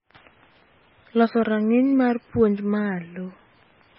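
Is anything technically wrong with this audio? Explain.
Yes. Throughout the speech the sound is watery and swirly, s sounds chirp metallically, and nothing is heard above 5.5 kHz. This is likely heavy MP3 compression at a very low bitrate, around 17 kbps, where the encoder cuts the treble and starved frequency lines flicker on and off between frames.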